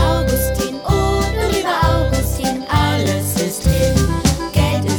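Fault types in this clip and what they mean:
No faults detected on this clip.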